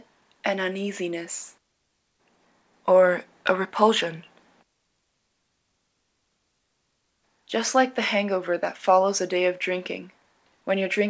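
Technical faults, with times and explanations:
The audio arrives through a WebRTC call path in good technical order, with its content stopping at 8 kHz in the way a wideband call codec such as G.722 would leave it.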